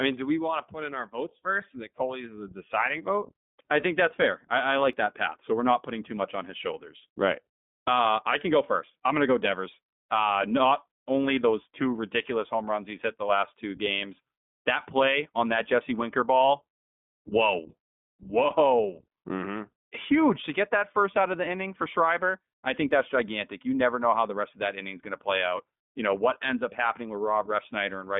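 The whole recording has passed through the iLBC codec, a narrowband VoIP coder that codes each 20 ms frame's excitation independently of the frame before it. Its rate fits iLBC's 15.2 kbps mode. The speech is confined to a telephone band of roughly 200 Hz to 3.6 kHz, with nothing above 3.8 kHz. The coding damage is plainly audible: consonants lose their air and the speech takes on a rough, slightly synthetic grain.

At 4.93 s a small piece of audio is missing and the two sides are butted together with no gap, producing a brief skip of around 7 ms. The likely cause is a recorder or processor working in fixed chunks and dropping audio while it closes one chunk and opens the next.

From 18.21 s to the end, a de-emphasis treble cut has been applied wrongly, either to audio that was never pre-emphasised or a second time. The response slopes smoothly downward, reaching about 10 dB down at 10 kHz relative to 1 kHz. 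Within the already narrow band the speech becomes duller and more muffled, with the upper formants pulled back.

At 22.91 s the same kind of skip returns, again roughly 7 ms lost at a seamless join. It falls 18 s after the first, which fits chunk boundaries spaced 6 s apart.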